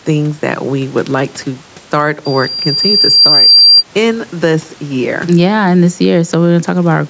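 Gain pumping runs through the whole clip. The gain swings by roughly 5 dB, pulled down under each louder syllable, so loud and soft parts sit closer in level and the speech sounds squashed. The likely cause is input gain set too high, with a fast limiter clamping every peak.

From 2.25 s to 3.84 s, just after "would like to start", a loudspeaker feedback squeal appears. A single tone at 4.7 kHz swells over about a second and a half to about 10 dB above the speech, as the microphone re-amplifies its own loudspeaker output. It ends before "in this year yeah".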